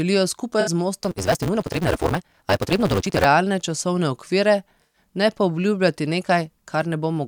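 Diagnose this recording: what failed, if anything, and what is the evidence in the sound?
AAC frame loss with concealment in the codec path: smeared, noisy patches at 0.60–0.69 s and 4.83–4.99 s, consistent with three and five lost frames being filled from the last spectrum.

Block size mismatch (truncated) at the driver or buffer stage, 1.03–3.25 s, ending before "realne časovne": a 188 Hz buzz and speech running 1.88 times fast with its timbre intact, which fits a 256-sample read.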